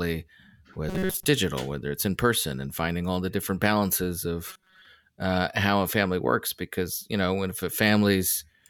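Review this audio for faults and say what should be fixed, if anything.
Robotic sound from repeated short buffers occurs from 0.89 to 1.25 s and again from 4.49 to 4.86 s. The speech becomes a rigid metallic buzz at 188 Hz. Likely, audio arrived too slowly, so a roughly 5 ms fragment was replayed for most of each stretch. Give the playback path more buffering headroom to prevent this.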